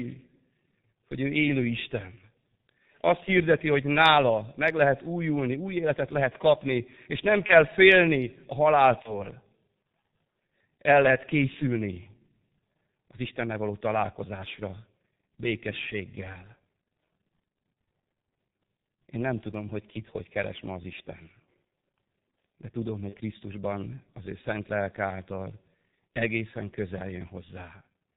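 Throughout, the speech sounds muffled and hoarse, with nothing above 4 kHz and smeared consonants. This is heavy G.723.1 codec damage: its slow-updating voice model and 30 ms frames, at a rate that fits the 6.3 kbit/s mode, flatten detail.

At 7.46 to 7.54 s, just after "lehet kapni és nem", the speech briefly turns into a fading buzzy or noisy smear, and it recurs at 9.02 to 9.23 s and 23.09 to 23.16 s. This is VoIP packet loss concealed by the speech codec. Each gap points to one lost 30 ms frame, extrapolated from the last pitch and filter, with the distortion lingering after.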